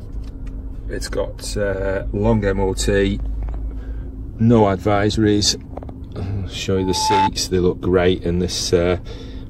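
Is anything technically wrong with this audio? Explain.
Yes. A loudspeaker feedback squeal runs from 6.76 to 7.30 s. A microphone is picking up the speaker it feeds, and at 870 Hz the loop gain exceeds one, so that tone builds on itself over just under half a second into a squeal around 5 dB above the rest of the sound.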